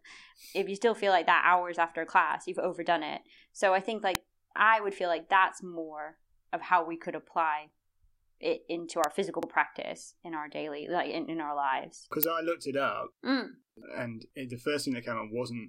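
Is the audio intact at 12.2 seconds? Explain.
No, an electrical switching spike at 12.23 s adds a sharp snap over the speech, likely an arc from a nearby switch or motor; unlike a dropout, nothing is removed.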